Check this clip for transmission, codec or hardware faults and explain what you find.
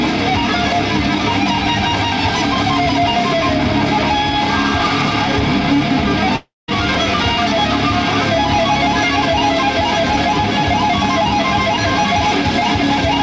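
One transmission fault stands out: a long network dropout from 6.36 to 6.70 s, heard over a call path whose G.722 coding leaves nothing above 8 kHz.

For about a third of a second the sound stalls. The last fragment is stretched into a fading buzz, then sinks into near silence for about 0.19 s before the audio resumes further along, with the missing part gone. The likely cause is a run of lost packets that the receiver's concealment covered at first and then abandoned. A brief packet loss leaves only a short smeared blip and the flow continues. Here the gap runs long enough for the synthetic fill to die away, and the audio jumps forward when it returns instead of picking up where it stopped.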